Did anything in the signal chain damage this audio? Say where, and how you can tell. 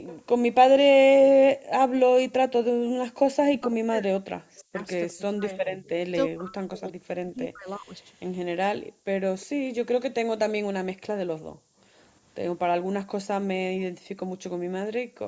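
Yes. Throughout, a steady thin hiss sits only around 25 dB below the speech and climbs sharply toward the top of the band. This is low bit depth with noise shaping at a sample-format conversion, which fits roughly 9-bit words, with rounding error pushed upward in frequency.

Faint delayed copies of the speech, some 25 to 30 dB down, trail by 343 ms at 0.06–0.2 s, 4.58–5.13 s and 9.4–9.46 s. This echo leak likely comes from a far-end loudspeaker whose call echo canceller let residual pickup through.

The room background drops by up to 40 dB for brief moments at 1.58–1.69 s, 8.89–9.05 s, 11.52–11.94 s and 15.04–15.18 s, then returns. This is background gated by the echo canceller, which pulled the microphone down hard while the loudspeaker played.

Between 3.54 and 7.92 s the talker's speech dips and breaks up in pieces, losing up to about 40 dB over roughly three seconds in total. This is speech suppressed in double talk, likely because the canceller confused overlapping speech with echo and attenuated both.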